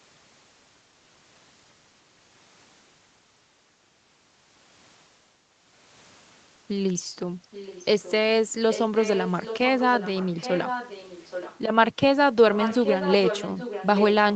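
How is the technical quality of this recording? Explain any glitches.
The recording has a clear echo leak in its second half: a delayed copy of the speech comes back under the talker, getting louder over the clip. It appears from 7.51 to 8.12 s, 8.7 to 9.59 s, 9.78 to 11.6 s, and from 12.54 s to the end of the clip. The copy trails the original by about 0.82 s. At first it is faint, roughly 20 dB down. It then rises to around 10 dB down, and in the final stretch it is nearly as loud as the speech itself, about 5 dB below. The likely cause is a far end playing the call through a loudspeaker, where the echo canceller failed to remove what its microphone picked up and sent that delayed sound back into the call. Throughout, the audio tops out at 8 kHz, consistent with the wideband call codec it passed through.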